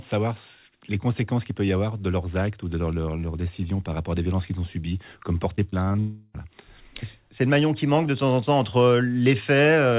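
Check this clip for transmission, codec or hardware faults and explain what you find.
Two faults sit back to back near the six-second mark. The call path underneath cuts everything above 4 kHz, which fits a narrowband G.711 A-law link at 64 kbps.

From 5.56 to 5.99 s the sound turns choppy and robotic as small pieces go missing. This is repeated packet loss. Six short gaps, the longest about 27 ms, were each patched by extending the previous fragment. Because the holes come so close together, about a quarter of this stretch is synthetic continuation rather than real audio.

From 5.99 to 6.36 s the stutter gives way to a fading buzz or hiss lasting roughly 0.35 s, with no drop into silence. The audio then resumes with that stretch missing. The likely cause is a long network dropout: nothing arrived for that span, and the receiver kept stretching the last received sound across the whole hole.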